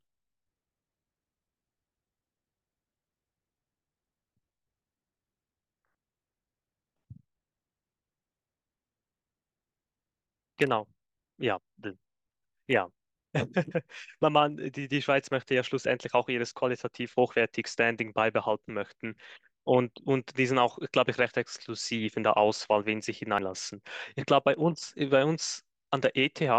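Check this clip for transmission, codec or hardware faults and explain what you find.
The speech has faults from two causes: damaged FLAC data in two places and one jump where compressed frames were never played.

Corrupt FLAC frame, at 14.22 s and again from 21.19 to 21.25 s. Flipped bits in the stored frame went unchecked, so the decoder's predictor ran on wrong values from the damage onward. The first is a tiny error peaking at about -43 dBFS. The second is a 60 ms error at about -16 dBFS. Both stop abruptly where the next intact frame takes over.

Compressed frames skipped, at 23.38 s. A stretch of roughly a tenth of a second of audio is missing because frames were dropped or rejected by the decoder, and playback jumps straight ahead. Lossless frames don't overlap, so the join is a hard click rather than a smeared blip, and the speech seems to lurch forward slightly at that point.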